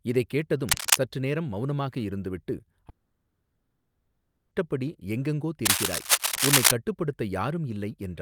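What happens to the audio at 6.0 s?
Between 5.65 and 6.71 s, dense, uneven rustling bursts of cable scratch noise sit a few decibels above the speech, likely from a worn cable or connector whose contact resistance flickered as it moved. The spectrogram shows ragged broadband smears, and the waveform shows spiky, irregular bursts.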